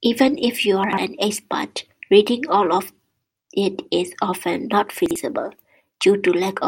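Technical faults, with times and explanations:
0.84–0.98 s, chunks out of order: a brief jumbled stutter, as one 46 ms chunk plays two chunks late, leaving hard joins around it.
5.06–5.16 s, chunks out of order: a shorter garbled blip, where one 46 ms chunk arrives one chunk late and swaps places with its neighbour.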